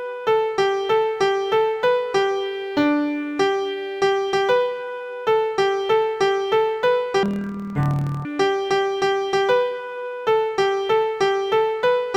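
Interleaved audio read as planar from 7.23 to 8.25 s: each 26.12 ms block of alternating left-right samples was split into halves, both stretched to double length, so the sound drops an octave, turns doubled and choppy, stuttering at 38.3 Hz.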